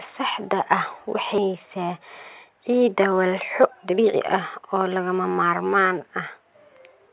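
This speech clip has a skip ahead at 1.38 to 1.40 s. Roughly a second of speech is gone, and the two sides are butted together with no gap or fill. Audio was dropped in transit or by an overflowing jitter buffer, so playback leapt forward. Jitter buffer speed-up follows from 2.49 to 4.15 s at 127% speed, then 4.61 to 5.67 s at 110%. Pitch stays put but delivery sounds rushed. The buffer held too much audio and trimmed short pitch-period pieces repeatedly, about 0.4 s and then about 0.1 s in total. Throughout, nothing is heard above 4 kHz, which fits a G.711 call codec.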